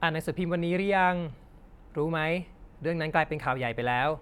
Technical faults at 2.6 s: none

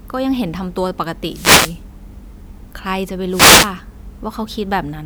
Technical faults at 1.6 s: wireless microphone noise hit

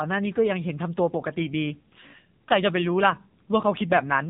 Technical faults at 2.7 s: AMR narrowband mobile codec

